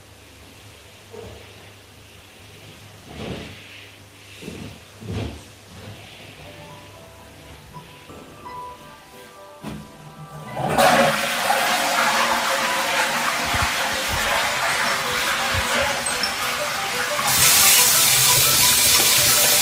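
A skip ahead at 8.09 s cuts about a second out of this recording of everyday sounds. The stretch was lost in transit or discarded by an overflowing jitter buffer while later audio was already queued. Playback jumps straight to that later material with no fill, so the sound on either side of 8.09 s is butted together and the delay drops by roughly a second in one step. A jitter buffer speed-up follows from 9.97 to 10.45 s. The receiver was holding more audio than its target and trimmed it by removing many short pitch-period-sized slices in quick succession. This removed around 50 ms in total, so the sound runs at about 110% speed over that half-second while keeping its original pitch and comes across as briefly hurried.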